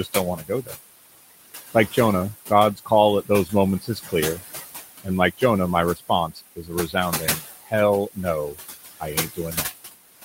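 Throughout the clip, noise suppressor artifacts come from a suppressor that pulls the room noise down by about 16 dB frame by frame. The background, sitting only about 10 dB under the speech, sinks in the gaps and swells beneath words.

Speech cut by the noise suppressor happens six times, at 0.04–0.72, 2.48–2.91, 3.26–4.42, 5.04–5.42, 5.95–7.73 and 9.0–9.72 s. Each time, the suppressor mistakes quiet speech for noise and cuts it by about 13 to 19 dB, deepest late in the clip. Roughly a tenth to half a second in each span sounds swallowed or faint.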